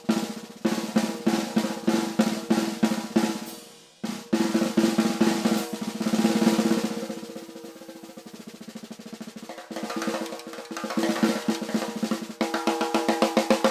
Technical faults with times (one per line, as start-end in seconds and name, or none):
none